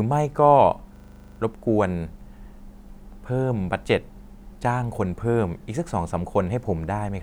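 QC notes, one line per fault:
0.96–1.4 s, system hang loop: a single 40 ms slice of the speech repeats identically 11 times, giving a rigid 25 Hz rattling buzz, which fits the playback hardware cycling one ring buffer while the system behind it stalled. Every repeat is the same to the sample and there is no gap or fade. A dropout would go silent and concealment would smear or vary, but this loop is mechanically exact. Little or no audio seems lost.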